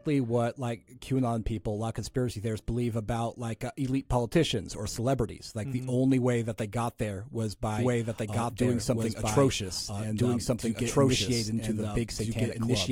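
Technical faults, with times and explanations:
7.79 s to the end, after "they got there was", doubled audio track: a second, slower capture path likely mixes in, so an equally loud, dry copy trails about one and a half seconds behind, entering abruptly.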